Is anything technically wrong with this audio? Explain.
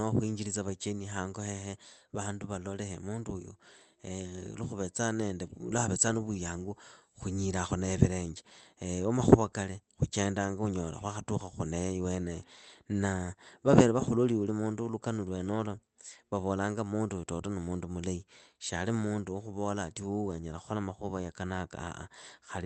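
No, nothing's wrong here; the speech just has the coding texture and the top end capped around 8 kHz that you'd expect from a normal call path, which fits Opus running at about 32 kbps.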